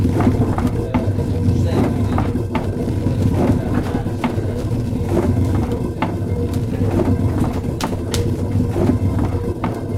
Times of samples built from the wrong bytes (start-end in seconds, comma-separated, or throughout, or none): none